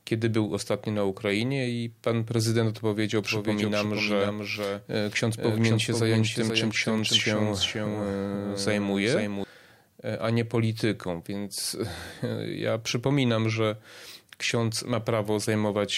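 From 3.24 to 9.44 s, after "i pan prezydent odpowiedział", a doubled audio track: a quieter copy lags about half a second, likely from double capture.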